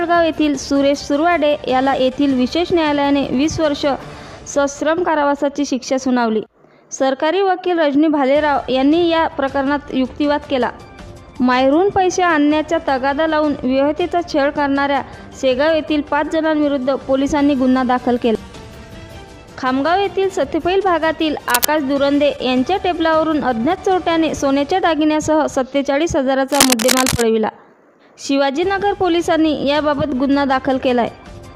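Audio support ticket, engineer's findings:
Cable scratch noise, 21.48 to 21.66 s and 26.51 to 27.22 s. Dense, uneven scratching and rustling bursts over the sound, roughly as loud as the programme itself; the second event runs about 0.7 s. Likely a worn cable, connector or control being moved, with contact resistance fluctuating rapidly and injecting broadband noise bursts into the signal. Check and reseat or replace connectors and cables in the chain.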